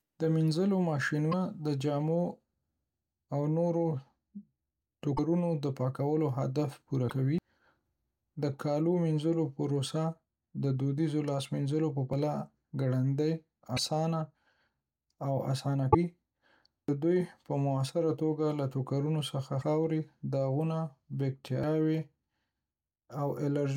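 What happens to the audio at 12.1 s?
Right after "دودیزو لاس مینځلو په", at about 12.13 s, there's a skip: audio missing between chunks. Roughly a third of a second just drops out, and the two sides butt straight together with no silence in the gap, so it sounds like the recording jumps ahead. The likely cause is the recorder or processor working in 5-second chunks and losing a little audio each time it closes one chunk and opens the next.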